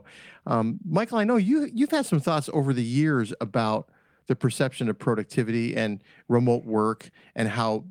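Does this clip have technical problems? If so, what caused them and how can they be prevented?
No, nothing in this speech recording points to a technical problem, so there is nothing to trace back or prevent.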